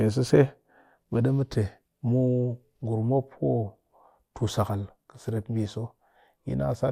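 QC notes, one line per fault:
5.42 s, DAB burbling: brief watery blips over the speech, where bit errors from weak reception slipped past error correction into the MP2 data. With a low error rate, corrupted samples put short blips of noise into single sub-bands, producing the watery blips.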